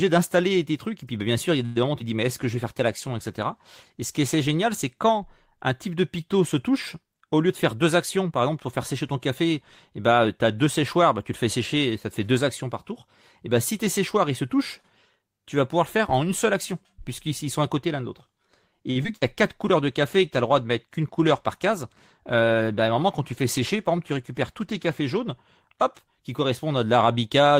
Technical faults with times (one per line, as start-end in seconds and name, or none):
1.65-1.78 call audio freeze
2.33-5.24 call bitrate drop
7.49-8.50 jitter buffer speed-up
18.91-18.97 short stall from a late packet
19.03-19.06 short concealed packet loss
19.16-19.23 burst of packet loss
19.48-26.81 call bitrate drop
21.19-22.42 jitter buffer speed-up